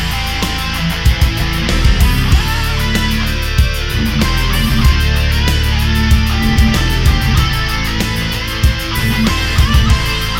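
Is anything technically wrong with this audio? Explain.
No, nothing technically wrong can be heard in this audio; the signal stays stable and intact throughout.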